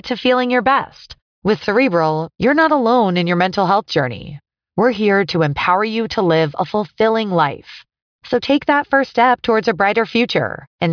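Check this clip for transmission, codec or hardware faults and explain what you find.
The speech signal is continuous and steady, with nothing audible that points to a problem anywhere along its recording or delivery path.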